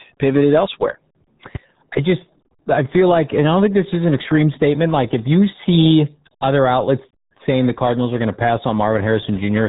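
From start to finish the speech sounds muffled and gargly, with a watery, bubbling texture and nothing heard above about 3.8 kHz, so sibilants and consonant detail are gone. This is RealAudio 14.4 codec damage, and it is heavy. The old dial-up speech coder squeezes the signal into a very low data rate, which fits about 8 kbit/s, by discarding the upper band outright and modelling what remains coarsely. That crude modelling produces the gargling smear.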